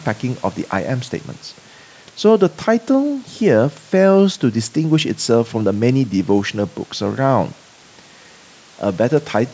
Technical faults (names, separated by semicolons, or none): none